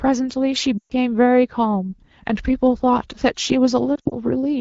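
At 0.78 to 0.92 s, lost AMR speech frames cause the speech to drop to near silence within two frames. This happens because the decoder repeats its last good pitch and vocal tract settings at falling gain, and the run fits about six 20 ms frames. From 3.96 to 4.15 s, scattered losses produce brief dips and warbles, with the longest 60 ms run sinking to near silence. Unlike a hard dropout, neither event cuts abruptly to silence. The wideband codec, consistent with 12.65 kbit/s, is clear elsewhere, though the voice returns weak or rough for a moment after each event.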